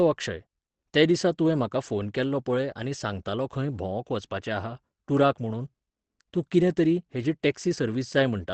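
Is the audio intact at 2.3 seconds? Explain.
No. At 2.3 seconds the speech carries the same damage heard across the whole clip, most likely Opus compression in its speech (SILK) mode. The sound is muffled and hoarse, with nothing above about 8.5 kHz, which points to a low rate near 16 kbps. SILK models the voice rather than coding every band, so the damage is dull and rough rather than the swirling, watery holes of MP3, and unlike a plain low-pass filter it roughens the voice itself.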